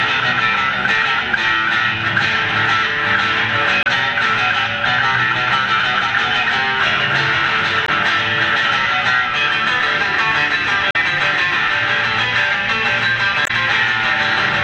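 Four brief faults from damaged data in a compressed stream break into the audio at 3.83–3.87, 7.85–7.89, 10.91–10.96 and 13.43–13.51 s. Each lasts 40 to 80 ms, as the decoder misreads corrupted frames and then resynchronises.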